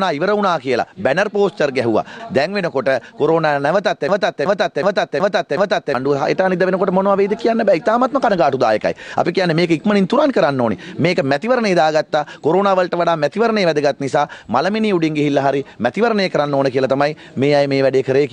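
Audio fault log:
4.09–5.94 s: system hang loop. The system froze while the sound hardware kept replaying its ring buffer, so a 0.37 s piece repeats exactly five times at about 2.7 per second. The result is a mechanical stutter, which fits a 16384-sample buffer, with roughly two seconds of audio lost.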